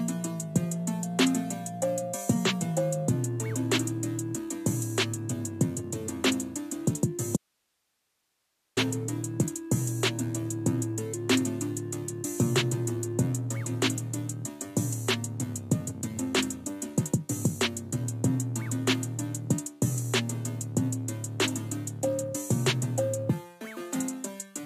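At 7.37 s the sound cuts out abruptly for 1.4 s, until 8.77 s, leaving only hiss about 50 dB below the signal: an audio dropout to a faint residue, likely a break upstream with the path after it still live. Unlike a pause or fade, the edges are instant and the hiss persists.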